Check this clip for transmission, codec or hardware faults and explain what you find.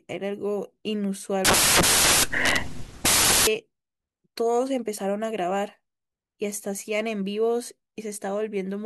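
One fault is present. From 1.45 to 3.47 s the speech is replaced by samples built from the wrong bytes: the byte pairing is misread, so rapidly varying low bits dominate each value. It sounds like loud, harsh broadband noise, a dense block on the waveform and flat broadband energy on a spectrogram.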